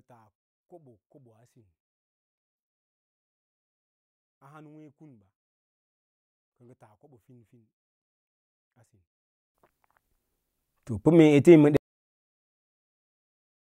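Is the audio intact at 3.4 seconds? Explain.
No. From 0.0 to 9.55 s the speech falls about 32 dB, likely because one channel is inverted, so the matching content cancels when mixed to mono. Unlike a plain gain drop or dropout, what survives is a faint residue of the channel difference.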